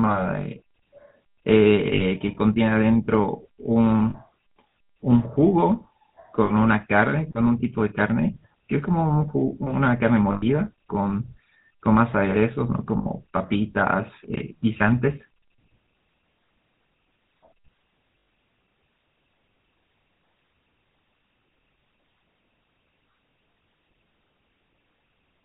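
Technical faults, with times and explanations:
Throughout, GSM full-rate codec: a vocal-tract model driven by sparse, regularly spaced pulses makes the speech buzzy and gravelly, with nothing above 4 kHz, consistent with 13 kbps coding.
1.94–2.04, 4.10–4.16, 6.44–6.51, 10.32–10.43, 12.98–13.07 and 18.18–18.28 s, lost GSM frames: for gaps of 40 to 100 ms, the last good frame is repeated, so the sound freezes into a rough, metallic ring.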